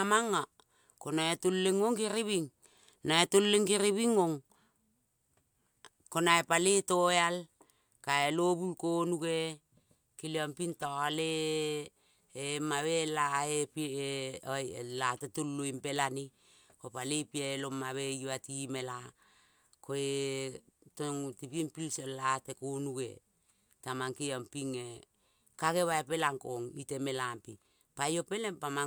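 Nothing in this speech recording stands out as a technical fault, so there's nothing here to walk through in time order.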